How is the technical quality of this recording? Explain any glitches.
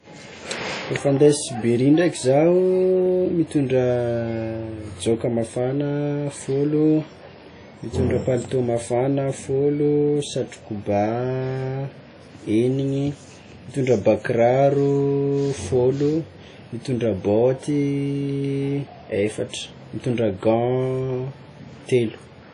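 The speech is clearly marred throughout by lossy compression, with plainly audible codec damage. The likely cause is WMA compression at a low bitrate, with a character that fits something around 32 kbps. Nothing is present above about 10.1 kHz. Its transform coder works on long blocks, so quantisation noise smears across tens of milliseconds around each sound, and weak spectral lines are discarded. The result is a ringing, washy texture with hiss that swells and recedes with the speech.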